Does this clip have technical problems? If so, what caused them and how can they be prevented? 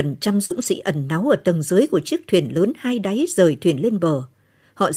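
Yes. The speech has two related network faults.

A short concealed packet loss runs from 0.45 to 0.52 s. About 40 ms of audio never arrived in time, so the receiver extended the preceding sound to cover the hole and then blended back into real audio, giving a brief smear or wobble. Unlike the error-correction repairs, nothing of the original survives there; it is pure guesswork. Prevention: reduce packet loss and late arrival with a steadier connection and a jitter buffer sized for the network.

A lost packet rebuilt from error correction follows directly at 0.50 to 0.64 s, and again at 3.22 s. The first stretch, 80 ms, fits four 20 ms packets. The second is a single packet. Each was replaced by the low-bitrate copy carried in the next packet, so the sound continues without a gap but turns rougher and noisier for that moment. That continuity is what separates it from concealment, which invents the audio instead. 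Prevention: fix the underlying loss, since error correction only softens it.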